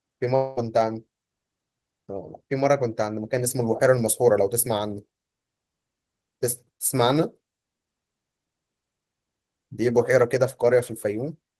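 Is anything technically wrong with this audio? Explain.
Yes. From 0.35 to 0.59 s the speech breaks up in what sounds like a long network dropout. For roughly 0.2 s the last sound is stretched into a smeared, buzzy tone that decays without ever falling fully silent. Normal speech then resumes, but about 220 ms of the original has gone missing. The likely cause is a run of lost packets, with the receiver synthesising filler from the last good audio until real data arrived again.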